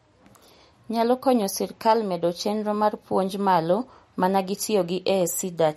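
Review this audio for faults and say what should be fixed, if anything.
Throughout the speech there is plainly audible MP3 compression: a watery, swirly texture as weak frequency lines drop in and out between frames, with nothing above 15.8 kHz. A spectrogram shows a hard ceiling and flickering gaps, which fits roughly 48 kbps. Encoding from the original at a higher bitrate, or keeping it lossless, would prevent this.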